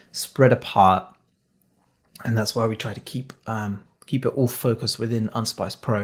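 Nothing in the signal chain of this speech recording is at fault, with the Opus voice compression running in its hybrid mode and keeping the full audio band.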